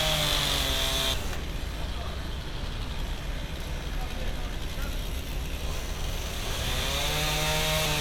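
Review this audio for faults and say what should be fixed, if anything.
Compressed frames skipped at 1.14 s: the sound jumps ahead by roughly half a second, because about fifteen compressed frames either never reached the file or were rejected by the decoder as damaged. The gap matches whole frames, which fits a 32 ms frame length. Prevent it by checking the file's integrity after transfer and re-encoding from an undamaged source.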